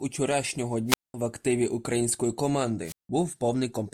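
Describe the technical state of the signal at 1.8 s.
At 1.8 s the speech signal is intact, with no dropout, click, clipping or other technical fault audible.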